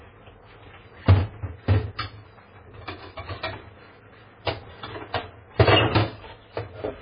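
A recording of sounds with heavy MP3 compression damage throughout, likely from a very low bitrate near 16 kbps: watery, swirly texture, smeared attacks, and a spectrogram cut flat at 5 kHz with flickering gaps below.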